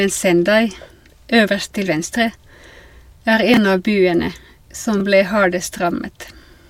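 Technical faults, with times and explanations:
3.54–3.57 s and 4.98–5.01 s, chunks out of order: at each point a 10 ms chunk of the speech plays two chunks late, after the two that should follow it. The 30 ms stretch sounds briefly jumbled, with three abrupt joins. Unlike a dropout or packet loss, nothing goes silent or missing, and unlike a repeated chunk, no sound plays twice. The audio is only reordered.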